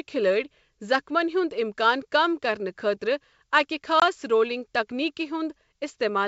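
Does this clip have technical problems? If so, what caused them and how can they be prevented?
Yes: packet loss on an ADPCM call at 4.00 to 4.03 s. About 20 ms, roughly one packet, drops to silence, and the decoder's predictor and step size briefly lose sync with the sender's. Packet-loss concealment plus a jitter buffer or redundancy on the G.722 stream would cover that gap.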